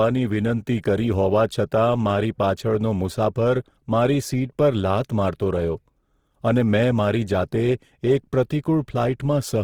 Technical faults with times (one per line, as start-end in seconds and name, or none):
0.00-9.63 Opus compression